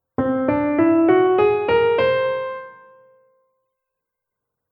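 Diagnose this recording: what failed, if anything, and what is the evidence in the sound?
Nothing failed; no faults heard.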